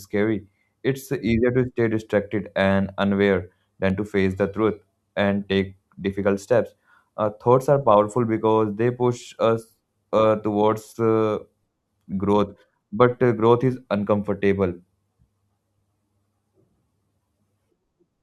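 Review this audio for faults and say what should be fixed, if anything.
At 3.9 s there is a dropped buffer (overrun), just after "stay distracted and unaware" and before "to face". The speech jumps forward. No gap of silence appears. About 10 ms of audio seems to be missing. The likely cause is the recording software not reading the input buffer in time, so the hardware overwrote it. To prevent this, use a larger input buffer or give the capture process higher priority.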